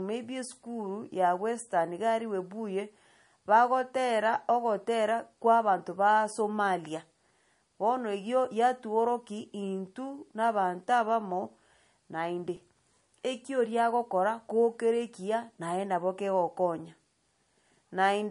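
Speech, with two technical faults. The first runs throughout and is likely MP3 compression. Nothing is present above 10.6 kHz, a hard treble cut of the kind the encoder makes when bits run short. The codec damage is plainly audible. Weak frequency lines drop in and out from frame to frame, giving the sound a watery, swirling quality, and s sounds turn metallic. The depth of damage fits a low bitrate, around 39 kbps. The second fault is an underrun with held sample at 12.56 s. The output buffer ran dry for about 2.7 ms, which fits a 128-sample buffer. The converter froze on its last value, so the waveform goes flat for that moment. Playback then resumes where it stopped, with essentially nothing lost, so the break is brief and soft rather than a sharp click.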